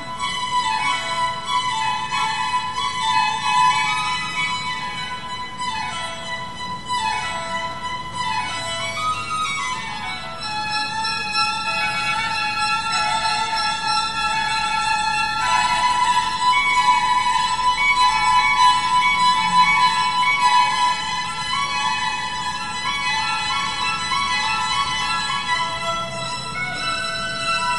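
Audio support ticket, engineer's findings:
No audible faults found; no action required.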